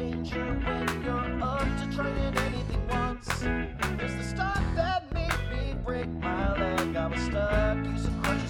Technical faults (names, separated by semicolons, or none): none